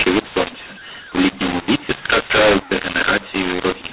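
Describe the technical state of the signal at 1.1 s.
At 1.1 s the mu-law and A-law mix-up persists across the whole clip: mu-law telephone speech decoded as A-law, scrambling sample levels into harsh distortion, with pauses filling with noise.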